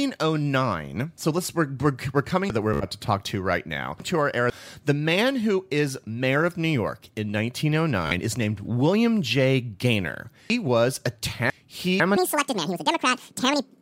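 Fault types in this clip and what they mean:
Chunks out of order: Around 2.5 to 4.5 s, a 500 ms chunk of speech plays three chunks later than it should, and around 10.5 to 12.0 s another plays two chunks late. Nothing is missing or repeated, which sets this apart from stutter, but the order jumbles.
Bluetooth stutter: At 2.74 to 2.85 s and 8.07 to 8.19 s, a tiny slice of sound repeats in a rapid buzz, covering about 70 ms and 42 ms of lost audio. The speech then resumes further along, skipping ahead, unlike reordered chunks, which keep every piece.
Section at the wrong speed: From 12.17 s to the end, the speech plays 1.8 times too fast, so the voice turns hurried and nearly an octave higher. The likely cause is playback on the wrong clock. Pitch and tempo rise together, which a pitch shift alone would not do.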